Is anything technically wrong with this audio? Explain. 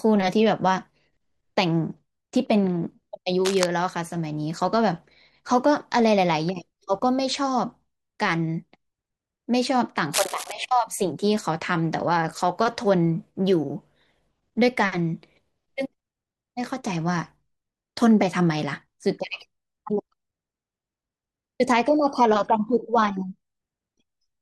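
Yes. Cable scratch noise appears twice, from 3.45 to 3.66 s and from 10.13 to 10.53 s. It likely comes from a worn cable, connector or control being moved, so that its contact resistance jumps around and injects dense, irregular noise bursts into the signal. Each burst sits only a few decibels below the speech, heard as a brief scratching or rustling laid over it for a fraction of a second.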